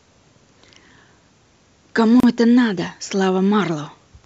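Speech, with a gap at a join of encoded pieces from 2.20 to 2.23 s. A 32 ms silence with smeared edges opens mid-sound, left by untrimmed encoder delay and padding where separately encoded segments were joined.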